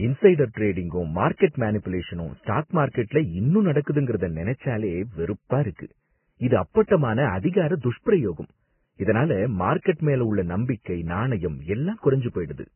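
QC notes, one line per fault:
Throughout: Vorbis compression. Nothing is heard above 3 kHz, so the speech sounds dull and narrow. What treble remains is hissy and grainy, and consonant attacks are smeared. The likely cause is Vorbis at a very low bitrate, near 10 kbps, quantising fine detail into noise.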